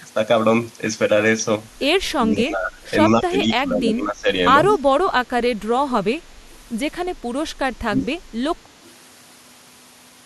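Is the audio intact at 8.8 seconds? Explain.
No. From 8.83 to 8.88 s there is an echo leak: a brief, faint repeat of the speech trailing it by 186 ms, roughly 35 dB below the direct sound. The likely cause is a far-end loudspeaker whose echo canceller let a scrap of its microphone pickup through and send it back. Unlike room reverberation, which decays smoothly right after the sound, this is a separate delayed copy arriving after a clear gap.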